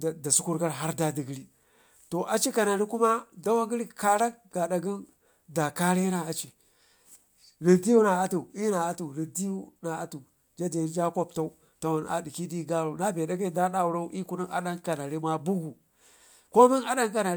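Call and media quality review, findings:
No audio faults found.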